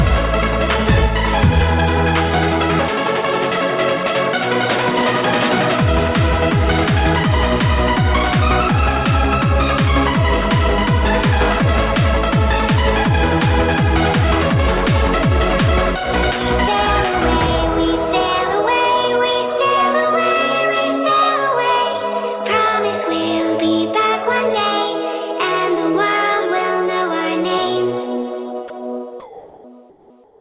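The audio runs through a narrowband call path. Nothing comes through above 4 kHz, which fits a G.711 A-law link. From 28.68 to 28.70 s there's sound dropped by the voice detector. About 10 ms of real sound vanishes into a brief patch of steady noise, likely because the sender's detector mistook a quiet bit for background and stopped transmitting. Right after that, comfort noise replaces the background three times: from 29.20 to 29.64 s, from 29.90 to 30.10 s, and from 30.24 s to the end. Each time the natural background turns into flat, featureless hiss, about 2, 5 and 3 dB quieter respectively. That's likely discontinuous transmission, with the receiver synthesising filler noise while the sender sits idle.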